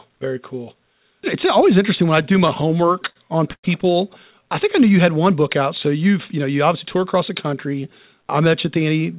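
A speech recording carried over a call link, band-limited with nothing above 4 kHz, which fits a G.711-style narrowband codec. From 2.22 to 3.17 s, just after "always interesting when I", there are repeated stalls (stutter). The sound halts 12 times. Each halt is bridged by stretching the last sound, about 173 ms in total, and the longest gap is 60 ms. That is about 18% of the span. Packets were arriving late, so the jitter buffer kept running dry. Nothing is lost, but the speech drags and catches. At 3.53 to 3.65 s a call audio freeze inserts a 101 ms gap. The last sound carries on briefly, then about 70 ms falls silent. Speech resumes where it stopped, so nothing is missing. The likely cause is packets held up in transit, emptying the buffer and pushing the playout delay back by the same 101 ms. From 4.32 to 5.15 s, ending just before "one book out", a jitter buffer slow-down plays the speech at about 93% speed without any change of pitch. 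The receiver repeats single pitch periods to rebuild its reserve, adding 65 ms in total. Vowels sound drawn out. From 7.46 to 8.15 s, right after "obviously tour across the", a jitter buffer speed-up runs the speech at about 106%. The buffer held more audio than it needed, so the receiver trimmed short pitch-period pieces, about 50 ms altogether. The pitch stays the same, but the phrase sounds hurried.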